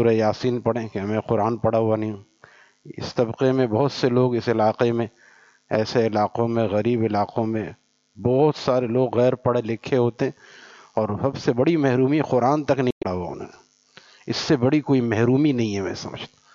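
At 12.89 to 13.05 s, damaged data in a compressed stream makes the decoder lose frame sync, giving a brief disruption in the sound.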